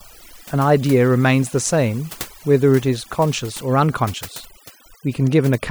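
A speech clip with overdone noise removal throughout. Noise reduction was set too strong. Bands near the noise estimate are pushed down or cut out. The background drops and breaks up into twinkling specks. Quiet parts of the voice vanish too.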